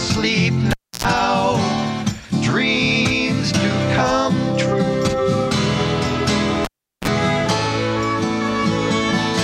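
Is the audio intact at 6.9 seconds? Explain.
No. At 6.9 seconds the signal is missing because of a cable pulled and plugged in, spanning 6.65 to 7.08 s. A live connector is withdrawn, giving a pop and then near silence lasting 0.38 s, which covers this moment. On reinsertion, the tip contacts first and picks up a 32 ms burst of 60 Hz mains buzz before the full connection seats. A second pop then marks the return of the sound.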